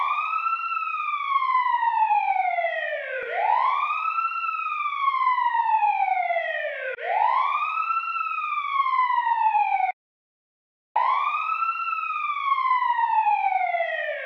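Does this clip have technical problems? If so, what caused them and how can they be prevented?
Yes. There is an audio dropout to silence from 9.91 to 10.96 s. The sound cuts off abruptly and about 1.05 s of silence follows, with no room tone or background underneath, before the audio resumes mid-flow. That dead-flat gap means the input signal was lost while recording continued and silence was written in its place, likely because a cable or wireless link briefly disconnected or an accidental mute was toggled. Whatever sounded during that second is unrecoverable. To prevent it, secure connections, avoid unmonitored mute controls, and watch input meters or record a backup track so that a lost signal is caught at once.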